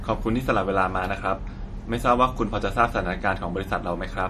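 All the way through, the speech has that plainly audible MP3 compression sound, likely from a low bitrate somewhere around 40 kbps. With bits that scarce the encoder keeps dropping weak detail, giving a watery, swirly edge and chirpy s sounds.

At 1.11 s there's a single sharp click. It's most likely dropped samples, just a couple of them. That gap is far too short to lose any sound, but the waveform jumps straight to a later value and leaves a thin tick.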